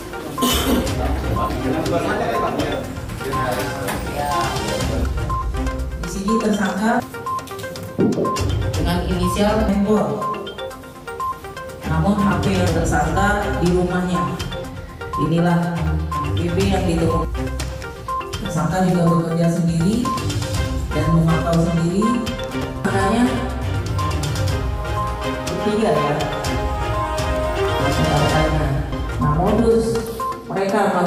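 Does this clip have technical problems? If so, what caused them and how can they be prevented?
Yes: chunks out of order at 22.55–22.64 s. One 23 ms chunk plays three chunks late, causing a jumbled blip. Unlike a dropout, no audio is lost. Reassembling chunks by sequence number or timestamp in a reorder buffer before playback or writing prevents it.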